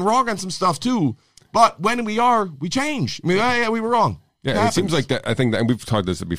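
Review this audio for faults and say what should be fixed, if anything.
Nothing in this speech recording needs fixing. No technical faults can be heard at any point in the audio.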